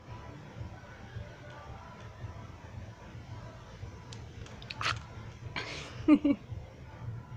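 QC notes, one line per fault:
Nothing to flag here; I listened all the way and didn't catch a single problem worth a line.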